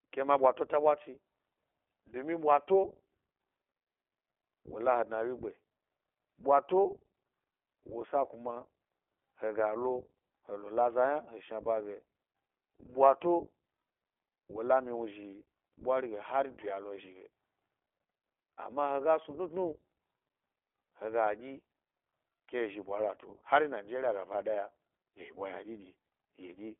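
Throughout, the iLBC codec band-limits the speech to 300 Hz–3.4 kHz with plainly audible rough, synthetic coding. On a spectrogram everything above 3.4 kHz is empty, and the codec runs in its 20 ms-frame mode.

At 11.64–11.67 s, lost iLBC frames (what sounds like one 20 ms frame) are concealed by a buzzy repeated pitch cycle, visible as a short, uniform periodic patch before normal speech resumes.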